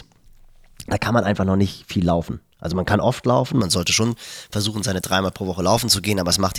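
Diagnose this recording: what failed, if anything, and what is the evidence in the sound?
Pre-emphasis left on at the recording or transmission stage, from 3.61 s after "man kann oft laufen". Speech turns thin and sibilant, about 11 dB bright at 10 kHz. De-emphasis never applied.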